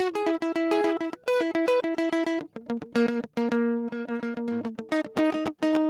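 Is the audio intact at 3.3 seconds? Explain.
Yes, the music plays through 3.3 seconds without any audible dropout, click, distortion or other fault.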